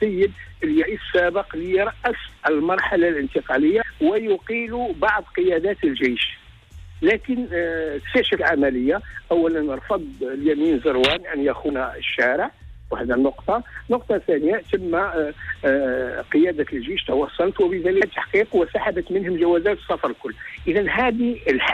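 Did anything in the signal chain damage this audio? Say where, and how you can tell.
Yes. Damaged data in the compressed stream, at the codec stage. Blips at 0.82–0.84, 3.81, 8.36, 11.68 and 18.00 s mark misread frames before the decoder resyncs.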